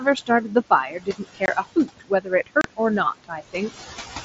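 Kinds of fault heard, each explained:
Overdone noise removal: suppression set far too hard strips bands near the noise estimate, leaving near-silent gaps with twinkling specks; spectrogram shows isolated bright dots on black background.
Noise suppressor artifacts: background is pushed down about 15 dB between phrases and rises under speech; spectrogram shows noise floor pumping frame by frame with speech.
Speech cut by the noise suppressor: parts of the speech are mistaken for noise and dropped up to about 21 dB, roughly a second's worth in 0.0–2.8 s, about 0.2 s more near 3.24–3.81 s; spectrogram shows missing faint energy.
Unconcealed Bluetooth headset packet loss: lost headset packets leave hard-edged silent holes of 22.5 ms at 1.46 s and 30 ms at 2.61 s; waveform shows abrupt flat gaps, spectrogram vertical blank stripes.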